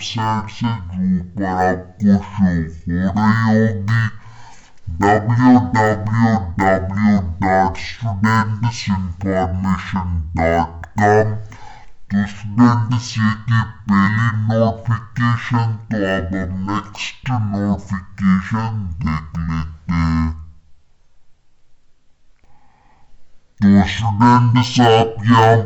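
From the very start and all the way through, this is a case of stereo read as mono. Left and right samples got played back-to-back as one channel, so everything runs at half speed and a full octave low, with a faint mirrored copy sitting up in the top half of the spectrum.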